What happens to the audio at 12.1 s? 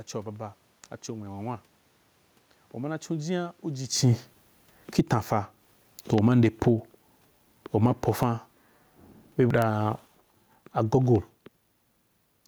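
At 12.1 s the audio is intact, with nothing beyond the background noise of the room.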